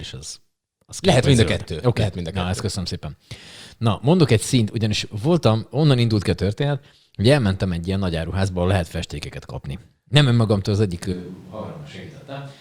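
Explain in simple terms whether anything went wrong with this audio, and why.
Switch to a distant microphone, from 11.14 s to the end. At that moment the speech suddenly turns roomy and hollow, loses its fullness in the low end, gets noticeably quieter, and more background noise comes through. The most likely cause is that the close microphone near the speaker stopped contributing, so the recording fell back on a microphone further away, which picks up more of the room's echo and noise along with the voice.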